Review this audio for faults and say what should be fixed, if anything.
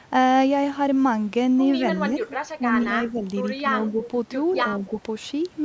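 Speech suppressed in double talk: with both sides talking at once, the echo canceller likely mistook the local talker for echo and turned the speech down. The speech dips by about 5 dB at 2.08–2.26 s, then dips further, by about 10 dB, at 2.58–3.26 s and 3.57–4.01 s. Preventing this needs a canceller with better double-talk detection that keeps suppression light while both sides are active.

Echo leak: the far end's echo canceller did not fully remove what its microphone picked up from its loudspeaker, likely during the same overlap, so a copy of the speech came back 194 ms late. A faint scrap about 20 dB below the speech is heard at 2.29–2.37 s, and a brief, slightly stronger one about 15 dB down at 4.04–4.08 s. At the far end, a headset or better acoustic echo cancellation would stop the loudspeaker sound from reaching its microphone and being sent back.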